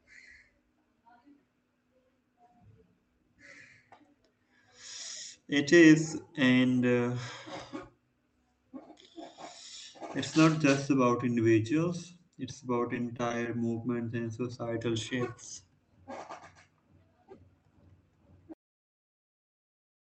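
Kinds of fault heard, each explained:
Scattered short gaps: Brief ticks and smeared hiccups between 12.89 and 13.79 s, after "just about individuals it's", as roughly five lost packets were patched by extending the preceding sound.
Cut-off end: At 18.54 s the speech halts mid-sound and drops straight to digital silence without decay, because the final buffers were never written or played.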